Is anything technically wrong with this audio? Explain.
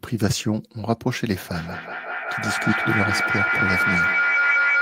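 Yes. Feedback howl from 1.53 s to the end: a microphone-loudspeaker loop gains level each trip, building a tone near 1.5 kHz that pulses roughly every fifth of a second and peaks about 2 dB above the speech.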